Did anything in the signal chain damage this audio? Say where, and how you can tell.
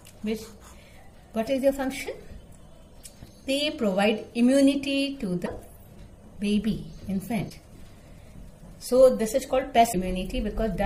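Yes, at the codec stage, a likely broken MP3 bit reservoir. Brief glitches at 5.45–5.48, 7.49–7.52 and 9.92–9.95 s each skip the audio ahead. After frames were lost, the next frame decoded someone else's borrowed bytes. Each lasts about one 26 ms MP3 frame.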